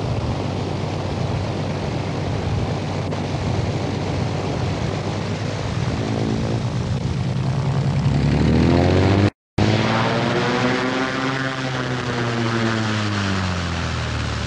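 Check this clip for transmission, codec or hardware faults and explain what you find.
Nothing in the transmission, codec or hardware chain stands out here; no dropouts, glitches or distortion turn up anywhere in the clip.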